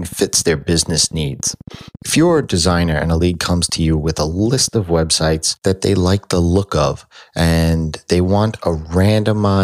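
From 0.05 s to 4.75 s a train of clicks ticks over the speech at a regular 14.3 per second, about seventy in all, peaking near speech level and audible in pauses, stopping just before "of websites that they". Likely interference or a faulty connection or power supply. Spectrogram shows evenly spaced full-band vertical lines; waveform shows regular sharp spikes.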